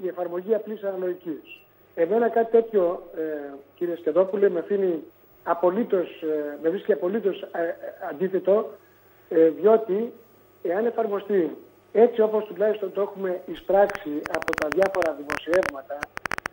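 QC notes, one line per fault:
13.90–16.47 s train of clicks: about 30 same-shaped clicks, unevenly spaced at around 11.7 per second and roughly 15 dB above the sound. They are likely interference pulses rather than random crackle.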